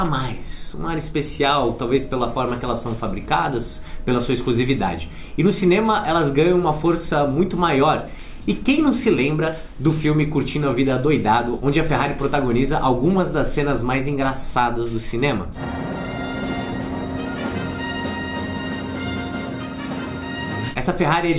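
No technical faults can be heard anywhere in the audio.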